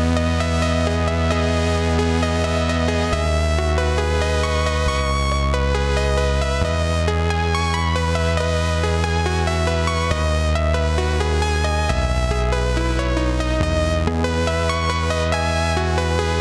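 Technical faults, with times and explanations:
No technical faults can be heard anywhere in the audio, and the signal holds steady and intact throughout.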